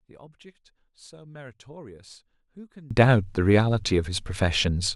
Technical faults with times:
0.00-2.91 one channel inverted

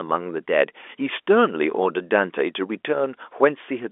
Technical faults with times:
none

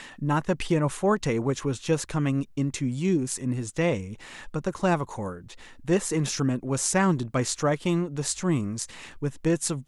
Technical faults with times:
none

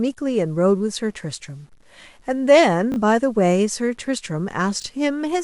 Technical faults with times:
0.00-5.44 low bit depth without dither
2.92-2.96 chunks out of order
4.80-4.84 chunks out of order

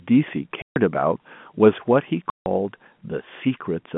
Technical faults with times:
0.62-0.76 packet loss filled with silence
2.30-2.46 packet loss filled with silence

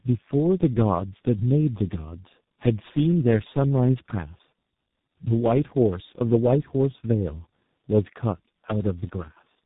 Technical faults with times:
0.00-9.66 tandem speech coding

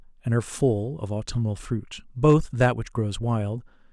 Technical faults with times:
2.25-2.66 hard clipping

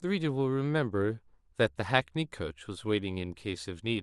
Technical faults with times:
none

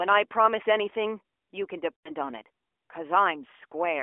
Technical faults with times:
1.97-2.11 lost AMR speech frames

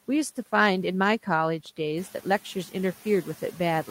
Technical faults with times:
0.00-3.90 noise suppressor artifacts

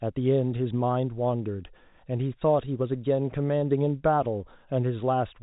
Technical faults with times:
none

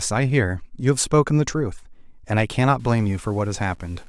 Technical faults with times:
2.80-4.08 low bit depth without dither

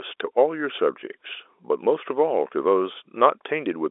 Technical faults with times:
none

